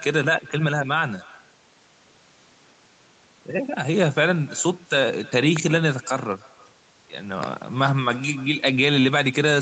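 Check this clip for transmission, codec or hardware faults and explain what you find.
Two kinds of fault are present: an echo with no canceller running through the whole clip, and loud pops at two points.

The echo with no canceller affects the entire speech clip. Every phrase is followed, roughly a third of a second later, by a faint, thin copy about 25 dB below the direct speech. The far end is most likely playing the call over a loudspeaker that its microphone picks up, and nothing removes it before it returns. On a spectrogram, each syllable's harmonic pattern repeats as a weak, slightly smeared ghost shifted right by that delay. Above 8 kHz both the speech and its ghost are empty, as the call's bandwidth limit sets.

The first loud pop comes as a pair between 5.57 and 5.78 s. Two sharp clicks stand around 10 dB above the speech, which continues underneath them. The likely cause is a sudden voltage step or pulse from a plug, a switch, static discharge or a driver glitch, shaped by the circuits after it. 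On the waveform they appear as two tall spikes jutting out of the speech envelope, and on the spectrogram as two thin vertical lines spanning the full band.

The second loud pop is a single event from 7.43 to 7.46 s, stronger at roughly 15 dB above the speech and heard as a hard snap or thump. It most likely comes from the same kind of sudden electrical transient. On the waveform it is one isolated spike, and on the spectrogram it is a single bright broadband stripe over the ongoing speech harmonics.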